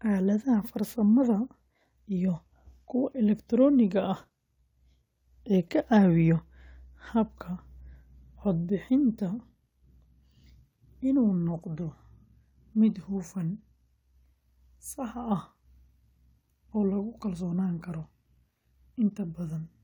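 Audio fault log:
There is no fault to log for this audio.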